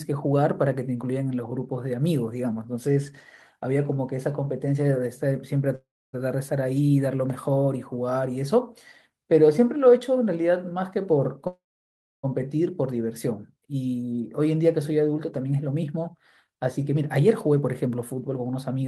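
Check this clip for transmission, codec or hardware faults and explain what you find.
Two kinds of fault are present, both tied to packet timing on a call. The speech stalls twice and later runs fast.

Call audio freeze, from 5.75 to 6.15 s and from 11.47 to 12.25 s. The sound stops moving and the last moment trails on as a fading buzz. It then drops to silence, for about 0.27 s in the first and 0.64 s in the second. The likely cause is delayed packets emptying the jitter buffer. The receiver extended the last sound while it waited. When the packets arrived, playback resumed where it had left off. Nothing is lost, but gaps of 0.38 s and 0.76 s have been inserted.

Jitter buffer speed-up, from 15.37 s to 18.83 s. The speech runs at about 108% of normal speed with no change in pitch, so it sounds hurried. The buffer held more audio than it aims for. To catch up, the receiver cut many short pitch-period slices in a row, removing roughly a third of a second in total.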